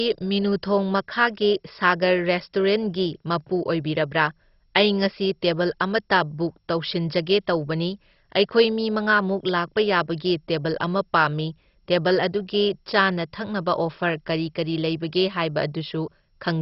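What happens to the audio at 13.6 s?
At 13.6 s the speech sounds dull and gurgling, with a grainy edge and nothing above 5.6 kHz, as it does throughout the clip. The likely cause is heavy MP2 compression at a rate consistent with about 32 kbps, which shuts off the upper sub-bands and coarsely quantises the rest.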